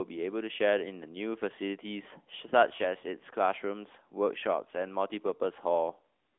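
From start to finish the speech runs through the AMR narrowband mobile codec. Nothing gets past about 3.6 kHz, so it's boxed into roughly 200 Hz to 3.5 kHz, and the pulse-driven vocal-tract model leaves a plainly buzzy, synthetic edge, which fits the 10.2 kbps mode.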